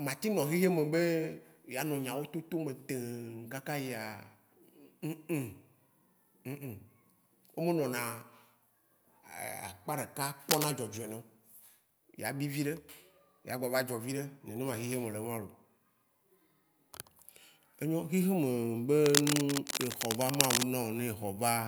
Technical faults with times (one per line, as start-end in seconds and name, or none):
10.49-10.68 cable scratch noise
19.04-20.63 cable scratch noise